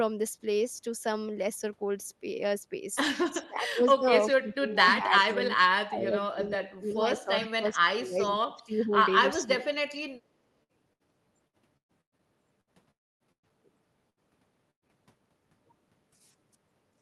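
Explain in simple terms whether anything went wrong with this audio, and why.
Several things went wrong in this speech recording.

From 3.39 to 4.08 s, 4.30 to 5.43 s, 5.62 to 8.95 s, 9.37 to 9.70 s and 10.19 to 10.27 s, the voice dips sharply or breaks into pieces. This is speech suppressed in double talk. The likely cause is that both sides spoke at once, and the echo canceller turned everything down.

Around 4.30 s there is a brief, faint, delayed copy of the voice, arriving about 0.39 s late. This is an echo leak. The far side was likely on a loudspeaker, and its echo canceller let a scrap of sound slip back.

From 10.63 to 12.70 s and again from 13.32 to 14.92 s, the sound turns choppy and robotic. This is repeated packet loss. Small pieces kept going missing, the longest about a tenth of a second. Each hole was patched by stretching the last sound.

From 12.91 to 13.23 s, about a third of a second of audio is gone. 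This is a long network dropout. A short fading buzz is heard, and then mostly silence. The likely cause is that no data arrived, and the speech resumes with that part lost.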